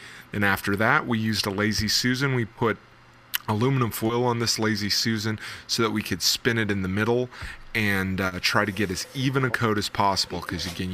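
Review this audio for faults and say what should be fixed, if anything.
Short concealed packet loss occurs at 2.53–2.57 s, 4.07–4.11 s and 8.27–8.33 s, covering 20 ms, 20 ms and 40 ms of missing audio. The decoder extended the preceding sound across each gap and blended back, so each one is a brief smear rather than the abrupt silence of an unconcealed dropout. A steadier network path, a larger jitter buffer, or forward error correction that recovers lost packets would prevent it.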